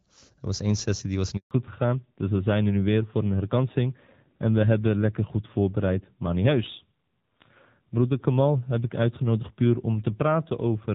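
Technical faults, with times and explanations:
1.37–1.51 s, handover gap: the speech dies away within a few tens of milliseconds into a dead silence of 140 ms, and whatever was said in that span is simply missing. The call was being passed to another network, and no speech frames arrived until the new link took over.
1.51 s to the end, fallback to narrowband: the speech turns duller and rougher, with nothing left above 4 kHz. Before the gap it has the fuller band of HD Voice. Afterwards the sound points to an older narrowband codec, fitting AMR-NB at around 7.4 kbit/s.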